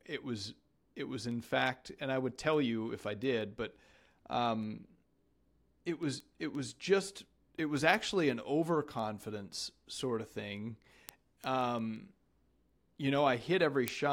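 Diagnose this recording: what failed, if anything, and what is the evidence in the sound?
Word clock ticks at the digital interface: sharp ticks recur steadily about every 0.2 s from 0.27 s to 14.06 s, varying in strength. An unlocked receiver's clock drifts against the sender's, on the order of 100 ppm, slipping one sample each time. Their clockwork regularity and lack of gaps rule out buffer dropouts.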